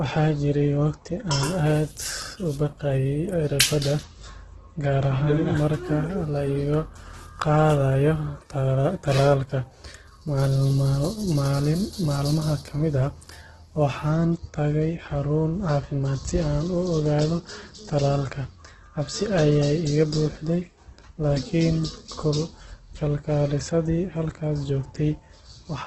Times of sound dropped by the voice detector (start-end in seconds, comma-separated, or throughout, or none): none